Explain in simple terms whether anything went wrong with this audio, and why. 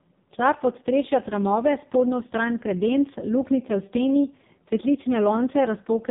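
The speech went through an AMR narrowband mobile codec for the whole clip, squeezed very hard the way an old phone call is. It keeps nothing above 3.7 kHz and rebuilds each short slice from a crude model, so voices sound muffled, buzzy and robotic.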